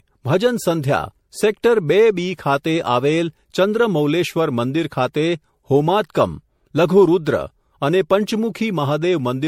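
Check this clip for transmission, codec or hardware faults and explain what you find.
One codec fault runs through the speech. Generation loss, throughout: likely about five MP3 re-encodes, consistent with 64 kbit/s, stacking fresh quantisation into swirly, hollow smearing, blurred attacks, nothing above 16.5 kHz.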